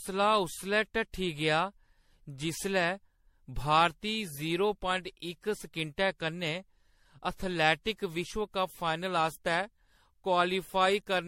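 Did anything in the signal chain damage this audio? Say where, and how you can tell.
Yes, at the codec stage: the speech sounds swirly and hollow throughout, with nothing above 16.4 kHz, likely generation loss from around ten lossy re-encodes, each adding fresh quantisation damage.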